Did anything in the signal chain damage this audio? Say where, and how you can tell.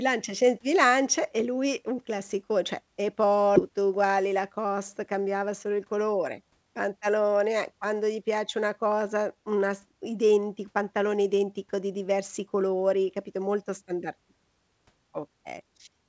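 Yes, both faults come from the network and jitter buffer. At 3.56 s there's a skip ahead: about 0.4 s of speech vanishes and the two sides butt together with no gap or fill.

Right after, from 3.69 to 6.66 s, a jitter buffer speed-up shaves off pitch-period slices, roughly 0.2 s in all. The speech runs about 7% faster at unchanged pitch, through a G.722 path that tops out at 8 kHz.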